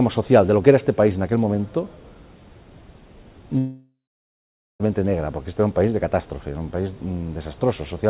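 From 3.58 s to 4.82 s the sound breaks off, likely from a long network dropout. The last moment smears into a fading buzz, then about 0.84 s of near-silence, and audio resumes with that stretch missing rather than delayed. A short packet-loss glitch would recover within milliseconds.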